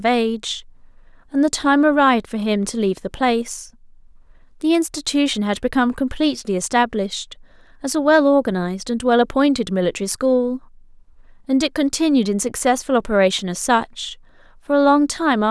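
No technical faults can be heard anywhere in this speech recording. Nothing breaks into the sound at any point, so there is no event to place in time.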